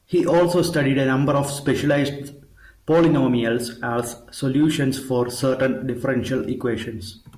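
Nothing goes wrong anywhere in this speech recording, so there's no technical fault to point to at any moment.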